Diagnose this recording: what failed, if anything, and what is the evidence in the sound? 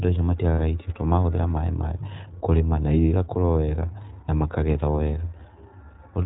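The speech is band-limited, with nothing above 4 kHz, and carries a plainly audible rough, slightly synthetic edge throughout. That points to the iLBC codec at the codec stage. Each short frame's excitation is coded independently at a low rate, which fits iLBC's 15.2 kbps mode with 20 ms frames.

From 0.54 to 0.60 s, just before "irio tondũ marahũthĩra maĩ", the sound turns into a brief held, faintly buzzy vowel-like tone. This is lost iLBC frames on the network. The decoder repeated the last pitch cycle with added noise across the 40 ms gap, which fits two dropped 20 ms frames. Speech recovers immediately because the frames decode independently.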